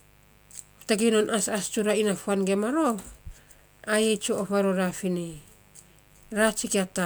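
A steady mains buzz runs under this speech from start to finish, roughly 35 dB below it. Sharp switching spikes repeating at twice the 50 Hz mains rate give it a raspy edge, with harmonics into the kilohertz range, unlike a smooth, low mains hum.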